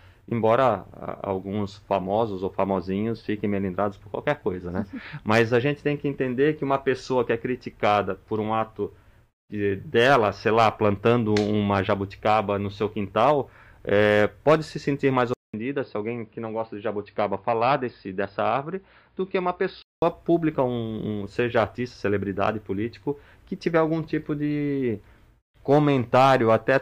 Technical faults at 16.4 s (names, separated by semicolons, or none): input switched to a poorer device